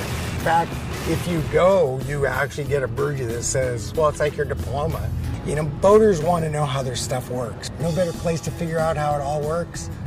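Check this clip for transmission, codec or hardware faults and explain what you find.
No faults detected.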